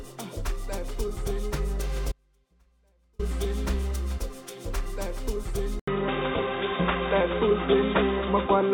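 An audio dropout to a faint residue runs from 2.12 to 3.19 s. For about 1.07 s the sound collapses abruptly to a faint leak roughly 35 dB below its normal level, likely from the signal being lost while the path stayed live. On a waveform it appears as a sudden near-flat stretch, and on a spectrogram as a pale band with hard edges on both sides. At 5.80 s an 80 ms silence is followed by a dull, narrower sound through to the end, with nothing above 3.8 kHz, a level shift of around 5 dB and a new noise floor about 45 dB down. This is likely an input switched to a poorer device. A spectrogram would show the upper band cut off sharply from that point, and the waveform a short gap and a change in amplitude.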